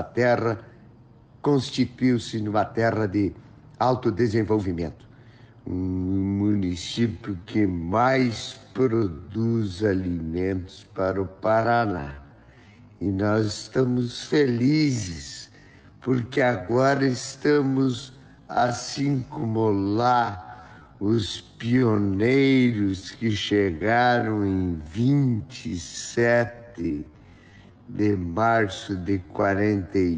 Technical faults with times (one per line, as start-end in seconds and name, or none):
6.04-30.18 time-stretched section